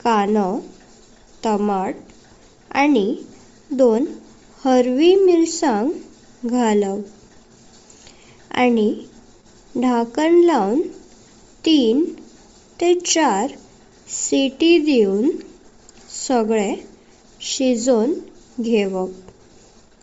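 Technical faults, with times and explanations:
Throughout, Bluetooth LC3 compression: the speech has a plainly audible breathy, grainy edge, and nothing comes through above about 7.7 kHz, so the top end sounds dull and hissy. That's likely the LC3 codec of Bluetooth LE Audio at a low rate, something like 32 kbps with 10 ms frames. At that rate it throws away much of the upper spectrum and patches the gaps with noise, which gives the voice that fizzy texture.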